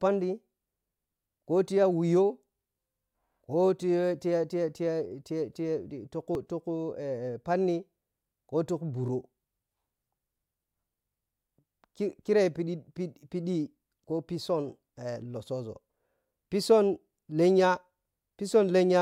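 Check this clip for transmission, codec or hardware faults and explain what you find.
One codec fault is present. Damaged data in a compressed stream at 6.35 s: corrupted bytes make the decoder misread a frame and resync, producing a brief blip in the speech.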